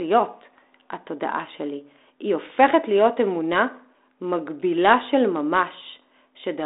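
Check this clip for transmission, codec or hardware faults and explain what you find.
Nothing stood out as a fault on listening to this speech clip.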